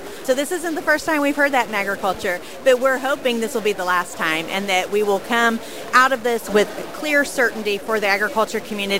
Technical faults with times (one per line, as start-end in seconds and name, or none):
0.00-8.99 stuck bit